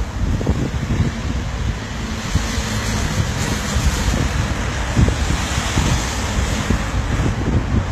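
A recording of sounds with plainly audible HE-AAC compression damage from start to finish. The treble sounds synthetic, with a gritty, metallic edge, and nothing is present above 14.9 kHz. That likely comes from spectral band replication copying lower bands upward, which fits a bitrate of about 20 kbps.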